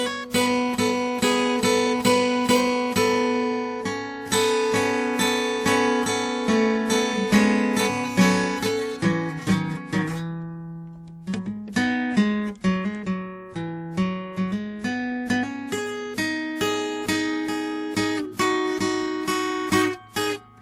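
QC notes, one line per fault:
Throughout: transcoding between lossy codecs. The music carries two layers of coding damage at once: the artefacts of a low-rate first stage, overlaid with a second coder's own artefacts. There is nothing above about 20.1 kHz. The likely cause is a chain in which a low-bitrate Opus-style encode was re-encoded by an older WMA-style codec, which spent its bits reproducing the first stage's artefacts while adding fresh ones of its own.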